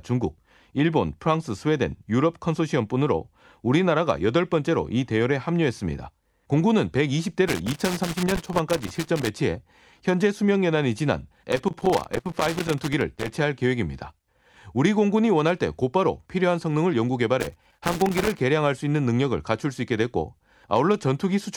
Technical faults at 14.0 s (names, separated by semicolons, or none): none